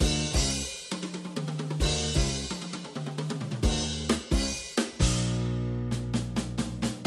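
No technical faults are audible.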